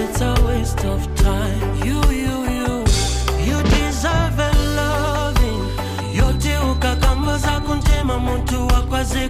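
From 5.23 s to 7.93 s a feedback whistle sits behind the sound: a thin, steady tone at 4 kHz, swelling and fading slowly in level, roughly 25 dB below the signal. Likely cause: a loudspeaker-to-microphone loop held just at the edge of feedback.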